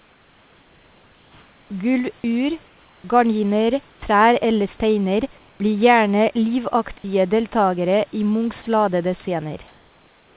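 From 2.66 to 3.04 s, just before "gardiner trær eller steiner", and again from 3.90 to 4.02 s, before "trær eller steiner blir", comfort noise takes the place of the background. The room noise, about 32 dB below the speech and band-limited to 4 kHz by the G.711 call path, gives way to a smooth, featureless hiss about 2 and 3 dB quieter. The likely cause is discontinuous transmission filling the pauses. Unlike a dropout, only background is replaced and no speech is lost.

From 8.62 to 8.66 s, sound is dropped by the voice detector. For 40 ms a piece of sound is missing and the same steady synthetic noise stands in its place, likely because the detector took that sound for background. Here, unlike the earlier pauses, real sound itself disappears.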